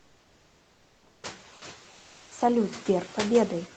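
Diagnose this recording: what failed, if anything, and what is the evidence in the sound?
Noise suppressor artifacts run through the whole clip, from the call-processing stage. Between phrases the background drops by about 11 dB and swells back under the speech. The suppressor attenuates, frame by frame, each band it judges to be steady noise.

Comfort noise in place of the background appears from 0.00 to 1.21 s and from 1.93 to 2.29 s, at the codec stage. In those pauses the room tone becomes a flat, featureless hiss, about 2 dB and about 1 dB quieter respectively. The sender likely stopped transmitting under Opus DTX, and the receiver synthesised shaped noise to fill each gap.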